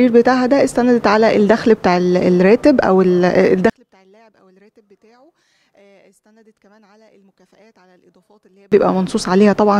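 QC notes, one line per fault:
3.70–8.72 s, one channel inverted: in mono the sound collapses by about 38 dB to a faint residue, with nearly all of it gone, background included. Likely one stereo channel flipped polarity, so the shared content cancels when both channels are summed.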